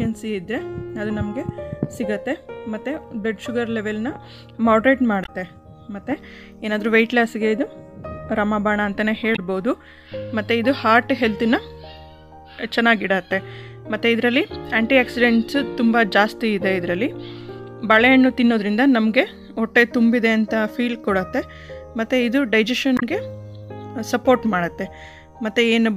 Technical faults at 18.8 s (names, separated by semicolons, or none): none